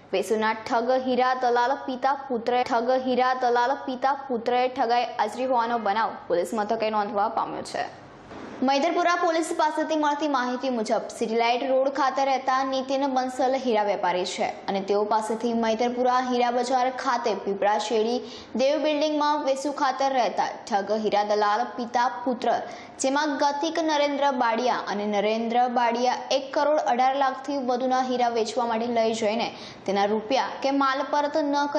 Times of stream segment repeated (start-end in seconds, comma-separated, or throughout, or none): 2.61-4.61